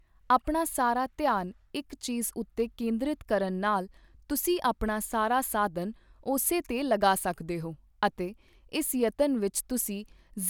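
Nothing stood out on listening to this speech recording.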